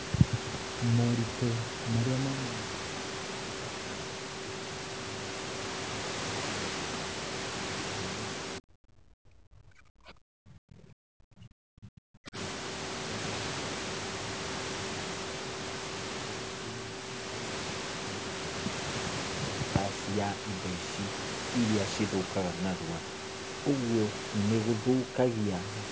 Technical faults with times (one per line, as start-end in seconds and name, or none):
8.59-12.36 speech suppressed in double talk